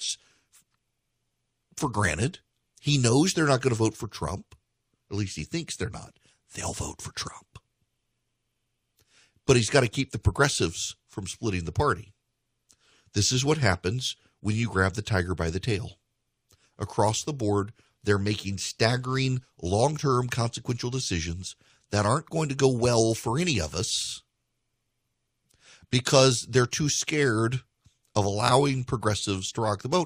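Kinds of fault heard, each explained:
No technical faults heard.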